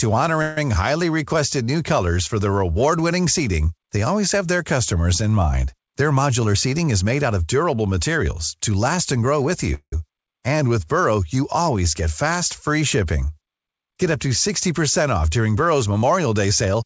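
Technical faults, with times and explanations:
0.42 to 0.65 s, call audio freeze. The sound stalls and the last fragment is stretched into a fading buzz for about 150 ms. Nothing is lost. The speech resumes where it stopped, just later. Packets were likely held up, emptying the jitter buffer.
9.74 to 9.93 s, call audio freeze, right after "last and grow with". The same stall runs longer, about 180 ms. The held sound fades out and ends in about 70 ms of silence. The speech then continues intact.
5.78 to 7.45 s, jitter buffer speed-up, between "their customers in mind" and "durable materials to last". Delivery runs at 109% speed with unchanged pitch, so it sounds hurried. The receiver had too much audio queued. It trimmed short pitch-period slices, roughly 150 ms in all.
15.56 to 16.83 s, jitter buffer speed-up, after "off during". Again the pace rises to 109% while pitch holds steady. About 150 ms of repeated cycles is cut to shrink the excess buffer delay.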